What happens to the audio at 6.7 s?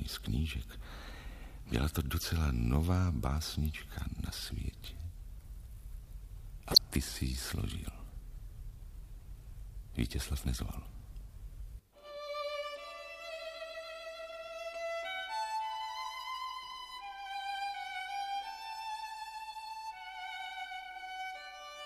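A corrupt frame decoded from 6.71 to 6.78 s. A few damaged frames play anyway, misplacing energy. It sounds like a chirp, squeak, blip or burst of noise peaking near about -10 dBFS.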